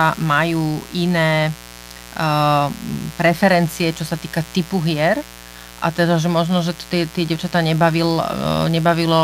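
Sharp switching spikes from the mains supply, at twice each 60 Hz cycle, are getting into the signal path, the kind of interference a dimmer, rectifier or missing shield lets through. From start to finish the speech sits over mains buzz at roughly 20 dB below the speech level. The 60 Hz fundamental and its stack of harmonics reaching into the kilohertz range give a steady, raspy buzz rather than a smooth hum.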